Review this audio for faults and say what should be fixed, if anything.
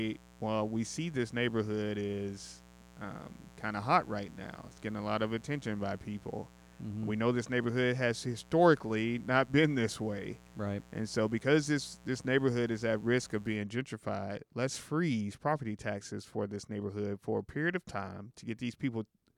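Mains buzz runs from 0.0 to 13.57 s, stopping just before "gentrified let's freeze property". It is a raspy 60 Hz buzz, roughly 25 dB below the speech. Sharp spikes twice per cycle add harmonics into the kilohertz range. Shield cables and keep dimmers off the recording circuit.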